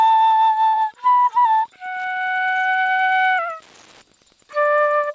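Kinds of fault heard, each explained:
Wi-Fi interference: A nearby Wi-Fi radio's signal is being picked up and rectified by the audio circuit. It shows as a faint, steady ticking under the whole clip, far below the main sound. The ticks repeat every 102.4 ms, from the radio's beacon.
Burst of packet loss: Several packets in a row failed to arrive in time, from 0.68 to 0.75 s. The receiver stretched the last sound for about 54 ms and faded it down. Playback then resumed further on, with about 60 ms of audio missing.
Short concealed packet loss: A brief stretch of the call reached the decoder too late, around 1.89 to 1.94 s. The receiver filled about 24 ms by continuing the previous sound, then blended back. It is heard as a short smear, with about 20 ms lost.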